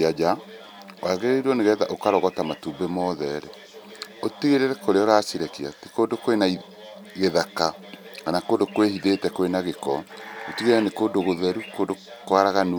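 No technical faults can be heard in this recording at any point.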